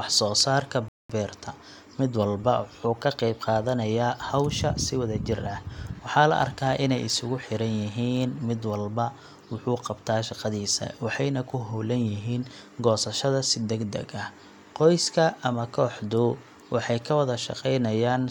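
A speech recording with two separate faults. At 0.88 s, right after "soo saarka", the sound drops to silence for about 0.21 s and then picks up with "beerta mid walba wuxuu" exactly where it left off. That is a rebuffering stall: playback ran out of downloaded audio and waited for more. Unlike a packet dropout, nothing is skipped. The gap only adds time, so the words on either side join cleanly. From 6.34 s to 8.77 s a steady buzz at about 92 Hz sits under the speech. This is a block size mismatch (truncated): one stage writes blocks slightly longer than the next stage reads, and the tail of each block is cut off, leaving a small discontinuity at every block boundary. The buzz's 92 Hz pitch, away from 50 or 60 Hz and their harmonics, separates it from mains hum. The speed stays at essentially 1.0×, so the two block sizes differ only marginally, and the speech neither rushes nor shifts in pitch.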